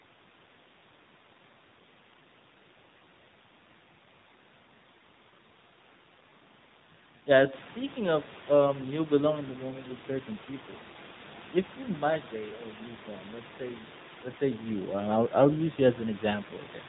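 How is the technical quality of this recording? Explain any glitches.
The recording is limited throughout by narrowband mobile coding. AMR narrowband mobile codec damage is plainly audible for the entire clip. At 7.4 kbps the speech is resampled to 8 kHz, so nothing above 4 kHz survives. Each 20 ms frame is rebuilt from a vocal-tract model driven by sparse pulses, which gives the voice a buzzy, synthetic edge. From roughly 7.5 s the room noise rises by about 11 dB but stays about 21 dB below the speech, and the codec turns it into a swirling warble.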